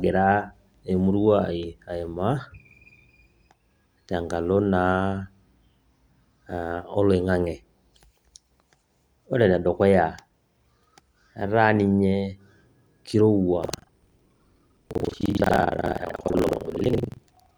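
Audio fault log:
13.61–17.57 s, buffer tearing: from here to the end the speech picks up a steady robotic rattle at 21.5 Hz, which fits a 2048-sample buffer. Writer and reader have slipped, so roughly two fifths of each period replays audio about a tenth of a second stale, with hard joins on both sides.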